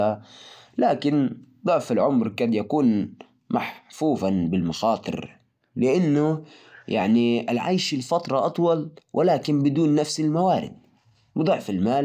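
No dropouts, clipping, glitches or other technical faults can be heard anywhere in the recording.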